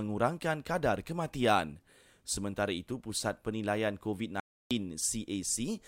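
An audio dropout to silence runs from 4.40 s to 4.71 s, cutting the speech off mid-flow for about 0.31 s before it resumes just as abruptly. The gap is silent, with no room tone or background hiss underneath, so it is not a pause in the talking. The input was most likely lost briefly, perhaps through a loose connection or momentary mute, while recording carried on writing silence. Whatever was spoken in that stretch is gone.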